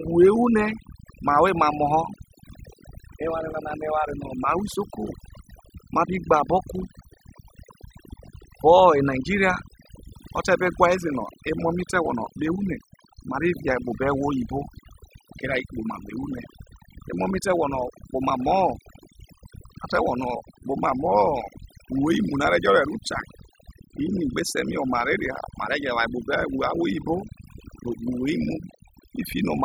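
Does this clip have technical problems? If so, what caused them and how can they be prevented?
Yes. Throughout the speech, the background drops to an unnatural near-silence scattered with twinkling, chirpy specks. This is overdone noise removal: a noise reduction tool set far too strong pushed individual frequency bands down or out whenever they came close to its noise estimate, stripping the quieter parts of the voice along with the noise. To prevent it, use gentler reduction settings and lower the noise at the source when recording.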